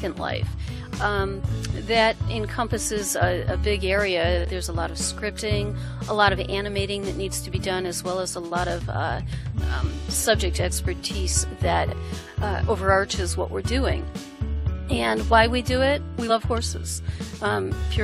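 No technical faults can be heard anywhere in the audio; the signal stays steady and intact throughout.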